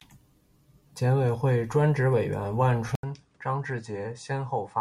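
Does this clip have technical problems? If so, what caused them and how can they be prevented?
Yes. At 2.95 s the speech cuts out for 80 ms, then returns duller and a little quieter, with nothing above 9.8 kHz, slightly lower in level and with a different, faint background noise that lasts to the end. The likely cause is the input switched to a poorer device partway through, with a narrower-band device taking over and bringing its own tone, gain and noise. Locking the recording input to one fixed device prevents this.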